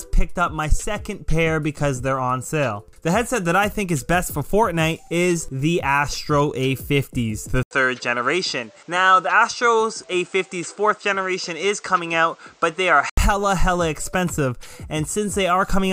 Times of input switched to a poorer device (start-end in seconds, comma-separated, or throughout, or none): 7.63-13.17